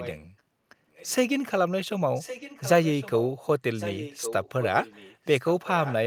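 A delayed copy of the speech returns about 1.11 s behind the original, from 0.0 to 0.2 s, 0.94 to 1.15 s, 2.14 to 3.31 s, 3.75 to 5.41 s and 5.64 to 5.94 s. This is echo leak. The copy is faint near 1 s, moderate elsewhere, and strongest after 3.75 s. It comes in scraps and longer stretches. The likely cause is a loudspeaker on the far end whose echo canceller let some of the returned speech through.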